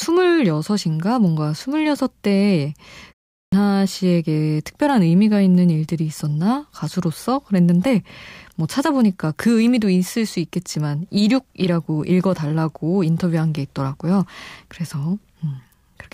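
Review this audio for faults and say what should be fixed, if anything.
At 3.35 s the speech comes back after a 0.3 s pause with a clipped start: roughly the first 175 ms, up to 3.53 s, is missing, so the word begins abruptly without its opening sounds. The output path appears to drop into a low-power or idle state during the short silence and needs that time to wake and resynchronise, swallowing the onset. To fix it, keep the output device active through pauses, or lengthen its idle timeout well beyond typical speech gaps.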